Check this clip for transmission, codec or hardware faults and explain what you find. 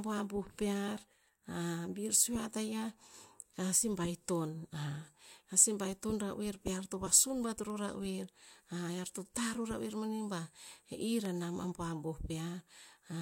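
One hardware fault is present. A loud pop at 11.25 s, most likely a sudden voltage pulse from a plug, switch or static, produces a single sharp crack well above the speech, which carries on underneath.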